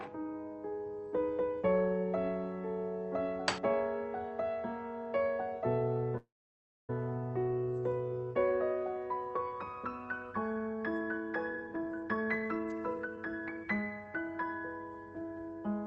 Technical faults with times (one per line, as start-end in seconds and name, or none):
6.17-6.90 call audio freeze
11.51-14.15 jitter buffer speed-up